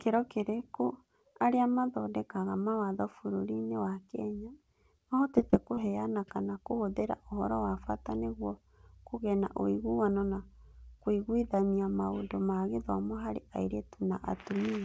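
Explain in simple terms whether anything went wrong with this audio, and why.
Between 5.32 and 5.79 seconds, just before "kana kũhũthĩra", the speech turns choppy. This is repeated packet loss. Small pieces of the call audio went missing four times in under half a second, each gap at most 24 ms, and the system filled each hole by stretching the last bit of sound. A single dropout would cause one brief hole. Here the gaps come close together, which gives a stuttering quality.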